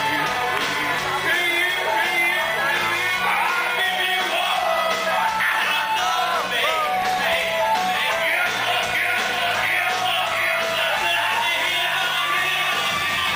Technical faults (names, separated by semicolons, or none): processor overload crackle; adaptive stream at a lower bitrate